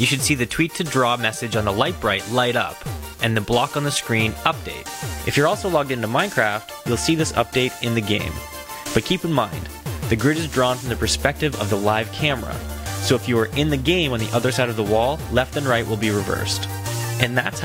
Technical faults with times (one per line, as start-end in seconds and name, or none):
none